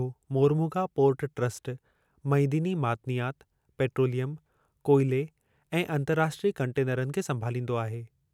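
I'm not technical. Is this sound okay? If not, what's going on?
Yes, nothing wrong can be heard in this recording.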